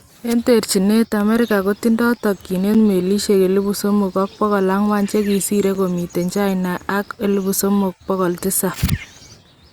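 Short, hard-edged dropouts of about 6.5 ms break the speech at 2.74 s and 5.75 s: a gap between chunks, where silence is inserted at each 3-second join.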